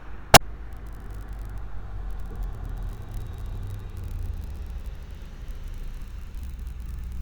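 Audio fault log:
0.33–0.41 s, damaged data in a compressed stream: for about 90 ms the decoder is fed corrupted bytes, misreads the affected frames and loses sync until it finds a valid frame header again, so the sound breaks into a chirp, squawk, click or short hole. On a spectrogram this appears as a narrow vertical disturbance with hard edges, and on the waveform as an abrupt discontinuity that does not match its neighbours.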